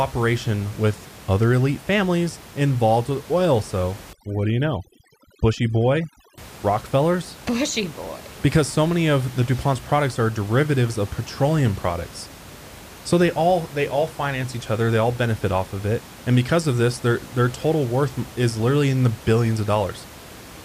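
From 4.13 to 6.38 s the speech runs into overdone noise removal. The denoiser was pushed too hard, so any frequency band sitting close to its idea of the noise gets pulled way down or shut off entirely, and the softer parts of the voice get caught with it. You hear the room noise, which elsewhere sits about 20 dB under the voice, drop and break up into little twinkling specks.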